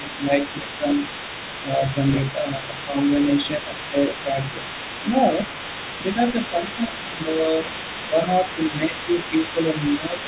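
A speech recording, band-limited to nothing above 4 kHz, which fits a G.711 mu-law call codec at 64 kbps. There is speech suppressed in double talk at 0.0–1.02 s, 1.63–2.98 s, 3.45–4.66 s, 6.15–7.5 s, 8.07–8.21 s and 8.78–10.22 s. The talker dips by roughly 5 to 10 dB in patches. This is likely an echo canceller turning everything down when both sides spoke at once. The other side's voice is also leaking through for the whole clip. It sits roughly 15 dB below the talker. Likely cause: the canceller failed to remove loudspeaker playback picked up by the microphone.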